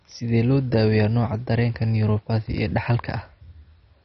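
Throughout the speech, the likely cause is heavy MP2 compression at a bitrate low enough to fit around 32 kbps. Starved of bits, the encoder shuts off its upper sub-bands entirely, so nothing survives above 6.1 kHz, and the bands it keeps are coarsely quantised and drop in and out. The result is a dull, muffled sound carrying a gurgling, granular distortion that stays present from start to finish.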